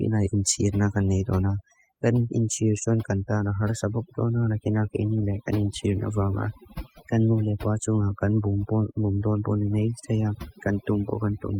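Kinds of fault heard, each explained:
Overdone noise removal: A noise reducer was pushed too hard across the whole recording. It cuts frequency bands that sit near its noise estimate, taking quiet parts of the speech too. Pauses drop to near silence with twinkling specks.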